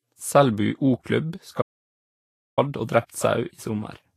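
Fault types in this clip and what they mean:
Vorbis compression: nothing above 14.2 kHz, with grainy, hissy treble and smeared attacks, which points to a likely low-bitrate Vorbis encode around 34 kbps.
Audio dropout to silence: from 1.62 to 2.58 s, about 0.95 s, the speech cuts to complete silence with no room tone, likely from lost input.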